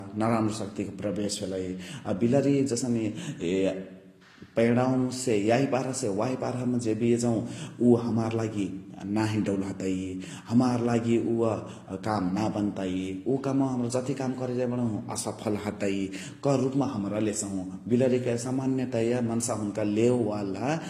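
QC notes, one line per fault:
Throughout, transcoding between lossy codecs: the speech carries two stacked coding textures, swirly metallic highs under a grainy smear, with nothing above 15.1 kHz. This likely comes from a low-rate HE-AAC encode (about 24 kbit/s) re-encoded as Vorbis (about 47 kbit/s). On a spectrogram, the top shows a flat ceiling above blotchy, patchy upper bands.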